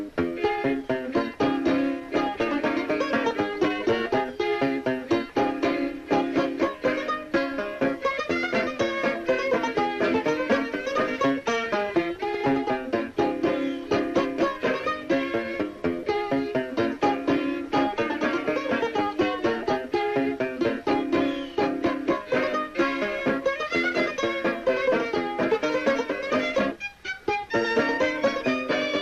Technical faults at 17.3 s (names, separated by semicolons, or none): MP2 compression